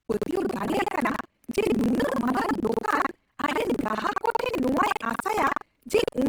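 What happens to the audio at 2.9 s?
At 2.9 s the speech carries a steady robotic rattle, a low buzz at about 21.5 Hz that is present only while sound is playing. This is buffer tearing, and it runs through the whole clip, not just this moment. The writing side and the playback side of the ring buffer have slipped, so every period is spliced: roughly a third of each buffer replays audio from around a tenth of a second earlier, with hard joins at both edges. The repeat rate fits a 2048-sample buffer.

Layered on the same moment, the voice sounds grainy and rough, with tonal parts turning noisy rather than swirling. That is likely Opus compression in its music mode, which is plainly audible across the entire clip. The bandwidth stays full, so the damage isn't muffling. Instead, bands the encoder can't afford are filled with folded or noise content, which points to a low bitrate of around 16 kbps.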